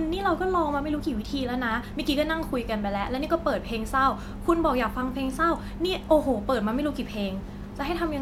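A speech recording with nothing technically wrong with it.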